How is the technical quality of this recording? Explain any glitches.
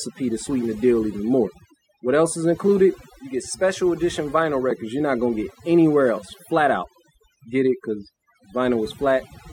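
Overdone noise removal runs through the whole speech recording. A noise reduction stage was pushed too hard, so any frequency band that sits close to its estimate of the background noise gets pulled far down or switched off entirely. The softer parts of the voice fall under that threshold and are removed along with the noise. The gaps drop to near silence dotted with twinkling specks.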